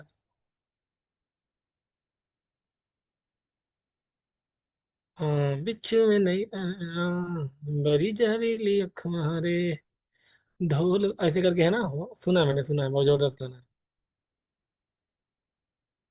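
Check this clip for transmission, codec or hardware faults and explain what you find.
No fault is audible: the speech signal holds steady in continuity throughout, with no gaps, distortion or interruptions.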